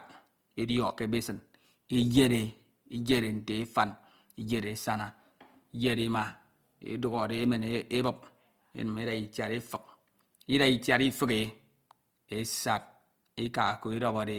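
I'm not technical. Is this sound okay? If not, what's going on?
No. Throughout the clip, the speech has a grainy, rough texture. Some sounds come out noisy instead of clean. The full range of high frequencies is still there, so it doesn't sound muffled. This points to Opus compression, likely set to a low data rate. When there isn't enough data to describe every detail, the encoder fills the gaps with noise or copied material. That patching is what makes the sound grainy.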